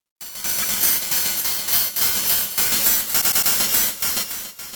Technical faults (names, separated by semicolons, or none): repeated frames